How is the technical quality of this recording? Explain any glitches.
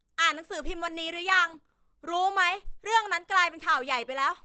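The recording is noticeably degraded, with audible codec damage across the whole speech clip. Opus compression is heard from start to finish, most likely from Opus running in its speech (SILK) mode at a low bitrate, one consistent with about 16 kbps. That mode models the speech instead of coding the full spectrum, so the audio sounds muffled and hoarse. A spectrogram shows a hard ceiling with nothing above 9.1 kHz, and the waveform looks ordinary.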